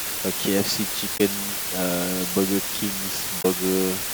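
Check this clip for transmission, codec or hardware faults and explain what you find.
Two faults are present: a heavy, constant hiss over the whole speech clip, and two brief glitches where compressed data was damaged.

Low bit depth with dither: from start to end, an even, steady hiss sits under the speech, roughly as loud as the speech itself, yet the speech carries no gritty distortion. That pairing points to the audio being stored with only 4 bits per sample, with dither added before rounding. The dither turns the coarse rounding error into smooth white noise instead of distortion that tracks the signal, at the cost of a very high noise floor.

Damaged data in a compressed stream: at 1.14 to 1.21 s and again at 3.38 to 3.45 s, the speech briefly gives way to a short chirp or blip, each lasting about 70 ms. Here part of the compressed stream was corrupted, so the decoder misread those frames, lost its place, and had to hunt for the next valid frame header before normal decoding resumed.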